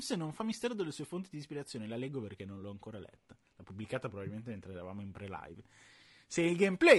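From the start to the end, the speech has a rough, grainy edge, with hiss filling in between the harmonics and a top end that sounds thinned out and a bit synthetic. That's likely low-delay AAC compression, the AAC-ELD kind used for calls. Its short frames can't pin down pitch harmonics cleanly, so at a modest rate, which fits something around 32 kbps, the damage is plainly audible.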